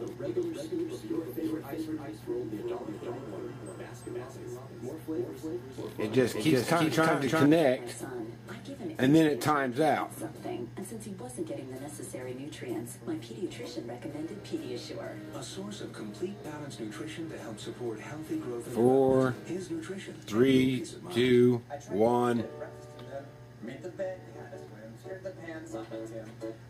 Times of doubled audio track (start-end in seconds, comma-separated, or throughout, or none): 0.00-7.46